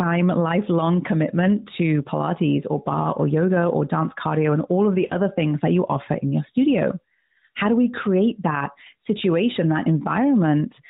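A lost AMR speech frame at 5.08 to 5.14 s: the frame failed its checksum, so the decoder bridged the gap by reusing the previous pitch and vocal tract settings at lowered gain. This produces a brief dip or warble that fits a single 20 ms frame.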